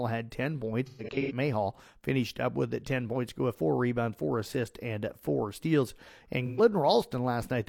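A smeared, phasey patch of speech from 0.86 to 1.32 s, its longest gap around 150 ms, recurs more briefly at 6.45 to 6.61 s: AAC frame loss with concealment, the decoder filling missing frames from the last good spectrum with scrambled signs or interpolated energy.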